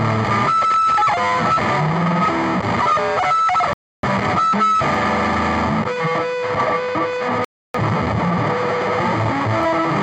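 At 3.73 s the audio cuts out and stays silent until 4.08 s, and the same thing happens again from 7.45 to 7.77 s. That's a digital broadcast dropout: the receiver stopped getting usable frames and muted until clean ones arrived. Each gap loses about 300 ms of programme, which fits roughly seven lost frames, and the sound picks up later in the material rather than where it stopped.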